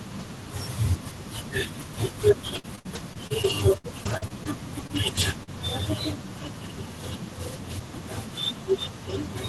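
A speech recording carried over an Opus call path, with the top cut off near 12 kHz and a coding texture that fits a bitrate around 24 kbps, shows three kinds of network damage. From 2.55 to 4.47 s there is repeated packet loss (robotic sound): eleven holes, the longest 64 ms, with about 17% of that stretch patched by extending the preceding sound. Because the gaps follow one another so closely, the result is a sustained choppy sound with pieces missing rather than isolated blips, with roughly a fifth of a second of the speech replaced. Short concealed packet loss appears twice, at 4.87 to 4.91 s and 5.43 to 5.49 s, each about 20 to 40 ms. Here the decoder stretched the last pitch or noise across a single hole and then blended back. Each one is heard as a lone smear or wobble where a consonant can drop out, and it lacks the sustained choppiness of the earlier stretch. Three lost packets were rebuilt from error correction, at 4.95 to 4.97 s, 5.15 to 5.17 s and 5.21 to 5.23 s, each 20 ms. 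The following packet carried a low-bitrate copy, so nothing goes missing and nothing is smeared. What tells these apart from concealment is that the sound stays continuous, but each 20 ms frame turns briefly coarser and noisier before the normal coding quality returns.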